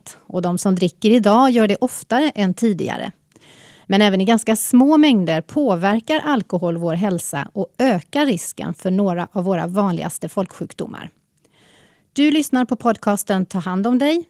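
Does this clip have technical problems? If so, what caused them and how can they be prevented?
No, there are no audible technical faults in this speech recording, so there is nothing to trace back or prevent.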